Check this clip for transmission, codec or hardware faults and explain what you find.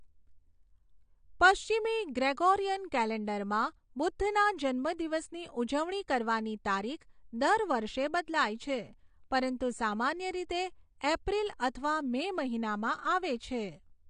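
One codec fault runs through the whole speech clip. Throughout, it shows AAC compression damage: nothing above 9.7 kHz, with plainly audible artefacts. This is likely AAC-LC at a low bitrate, which fits about 32 kbps. To save bits, the encoder dropped the top band and quantised the remaining lines coarsely against its hearing model.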